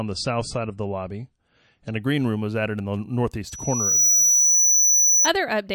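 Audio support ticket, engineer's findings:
Adaptive stream starting at a low bitrate, 0 to 2.0 s. Nothing above 9.5 kHz, stronger codec artefacts; points to an MP3 start near 34 kbit/s, stepping to roughly 128 kbit/s. Full treble returns abruptly at 2.0 s with no gap or silence, unlike a dropout or reconnect.

Loudspeaker feedback squeal, 3.47 to 5.30 s. Single 5.9 kHz tone swelling over about half a second to about 10 dB above the signal; mic-to-speaker loop gain exceeds one at that frequency. The self-building onset sets it apart from steady electrical whine or interference.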